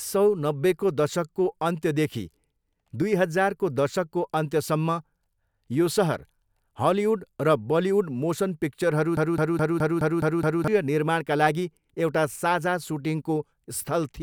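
Speech with a broken-record loop from 9.17 to 10.68 s, right after "मोसन पिक्चरहरू": a 0.21 s fragment repeats seven times, likely from a stalled player or stream. It shows as identical blocks tiling the spectrogram.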